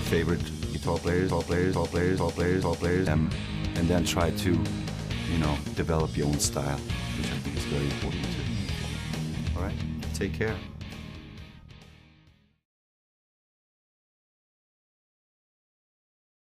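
A broken-record loop runs from 1.30 s to 3.07 s: a fragment about 0.44 s long plays four times in a row, each repeat identical and butted directly against the last, so the sound stutters in a fixed rhythm instead of moving forward. The likely cause is a stall in the player, encoder or stream that kept resending the last chunk it held, and whatever should have played across those 1.8 s never arrives.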